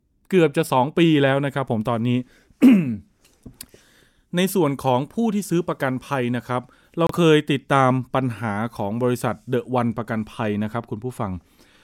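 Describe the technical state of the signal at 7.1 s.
At 7.1 s there is a corrupt frame decoded, running from 7.07 to 7.18 s. Flipped bits in a few compressed frames were played anyway. Misread gains and codes push energy into wrong frequencies. It sounds like a brief chirpy burst of noise over the speech, with the error peaking around -15 dBFS.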